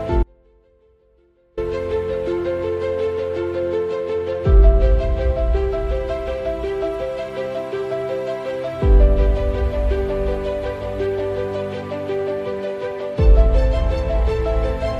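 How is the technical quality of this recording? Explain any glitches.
The recording has one glitch near the start. From 0.23 to 1.57 s, an audio dropout to a faint residue lasts about 1.34 s. The signal abruptly collapses to a faint leak roughly 35 dB down, likely from a brief upstream loss while the path stayed live. Unlike a pause or fade, it cuts off and returns instantly, and the gap is not silent.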